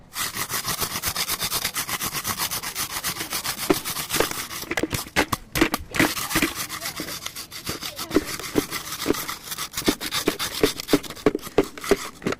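Sounds, with nothing technically wrong to report anywhere in the clip.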